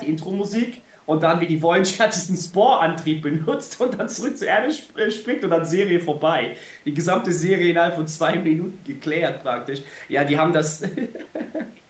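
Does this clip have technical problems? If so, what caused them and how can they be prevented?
Yes. Speech suppressed in double talk appears at 0.36 to 0.4 s and 0.92 to 1.04 s as brief dips of about 5 dB, then from 10.36 s to the end as a deep cut of about 25 dB. The likely cause is an echo canceller that couldn't separate this talker from overlapping far-end loudspeaker sound, so it turned both down. Better double-talk detection, or a headset on this end, would prevent it.

Echo leak appears at 0.79 to 0.99 s and 8.71 to 8.86 s as a faint delayed copy of the sound, trailing by 433 ms at about 35 and 40 dB below the speech. It likely came from a loudspeaker whose echo canceller left some residue in its microphone. A headset or a better-tuned canceller on that end would stop it.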